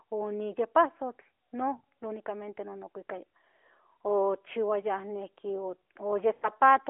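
Lost AMR speech frames hit at 1.78 to 1.84 s and 6.34 to 6.49 s. The decoder repeats the last good pitch and vocal-tract settings with falling gain, so the sound smears and fades over about 60 and 80 ms rather than cutting to silence like a plain dropout.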